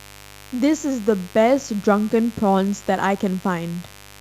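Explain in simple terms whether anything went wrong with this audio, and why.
A mains buzz runs under the speech throughout: interference from 50 Hz power wiring leaked into the recording, producing a steady, raspy drone.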